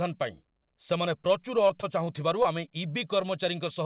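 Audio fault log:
1.68–2.70 s, scattered short gaps: around five tiny dropouts, none longer than about 20 ms, adding up to roughly 100 ms of lost audio. The receiver papered over each hole by stretching the last bit of sound forward, so instead of clean silences you get quick ticks and little smeary hiccups in the speech, with a small share of that stretch concealed. The narrowband call path, which cuts off at 4 kHz, runs underneath it.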